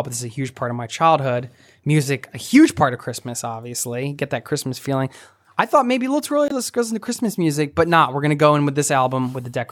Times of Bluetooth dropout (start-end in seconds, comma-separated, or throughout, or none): 6.48-6.52